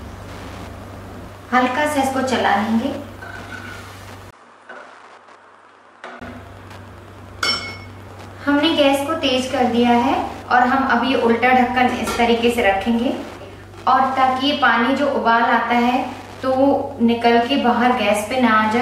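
The recording carries Wi-Fi interference from start to finish: a steady ticking at roughly ten per second, matching a 102.4 ms beacon interval, sitting about 25 dB below the wanted sound. A nearby radio transmitter is coupling into the audio circuitry, where its pulses are rectified into audible clicks at the beacon rate. From 4.31 s to 6.21 s the sound turns duller, nothing reaches above 10.2 kHz, the level falls by around 5 dB, and a different noise floor appears roughly 50 dB under the signal. A brief gap of about 20 ms marks the transition. This is likely the input switched to a poorer device partway through the recording, with its narrower bandwidth, lower gain and its own background noise taking over until the original input returns at 6.21 s.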